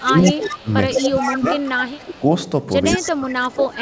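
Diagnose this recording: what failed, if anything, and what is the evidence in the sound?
Call processing is the failing stage: the far end's echo canceller, likely working against a loudspeaker, let part of its microphone pickup through, producing an echo leak. From 0.00 to 2.25 s and again from 2.85 to 3.34 s, a copy of the speech trails the original by 158 ms, at about 10 dB below it in the first stretch and about 15 dB below in the second. It is heard as a delayed double of the voice.

The same canceller likely also suppressed speech in double talk. When both ends were active it could not tell the local talker from the echo and pulled both down. The speech dips and loses level in pieces from 0.04 to 0.69 s and from 1.00 to 2.22 s, by roughly 15 dB at the deepest. From 2.93 s to the end at 3.81 s it drops by around 20 dB. All of this sits on a call path whose audio stops at 8 kHz, consistent with G.722.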